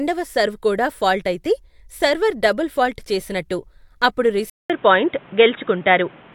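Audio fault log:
4.50 to 6.34 s, input switched to a poorer device: the recording path has likely moved mid-take to a different microphone or a headset's call profile, which carries a narrower band. After a gap of about 200 ms, the speech returns dull and boxy with nothing above 3.8 kHz, shifted in level by around 5 dB, and carrying a new, faint background noise well beneath the speech that was not present before the switch.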